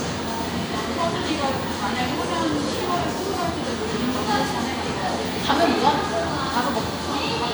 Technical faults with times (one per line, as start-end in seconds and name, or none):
none